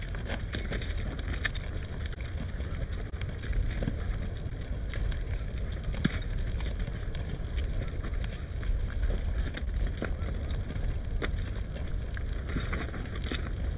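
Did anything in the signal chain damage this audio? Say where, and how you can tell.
Yes, at the network stage. Seven short concealed packet losses fall at 2.14, 3.10, 4.50, 7.37, 9.64, 10.73 and 13.02 s. Each is a brief smear or wobble where about 20 ms of audio never arrived in time, and the receiver extended the preceding sound before crossfading back. The audio is band-limited to 4 kHz, consistent with a G.711 mu-law call path, so the repairs sit inside narrowband sound.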